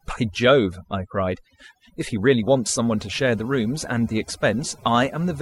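From start to end, the speech suffers overdone noise removal. Noise reduction was pushed too hard. Frequency bands near the noise estimate were cut deeply, taking quiet parts of the voice too. The background drops and breaks up into twinkling specks.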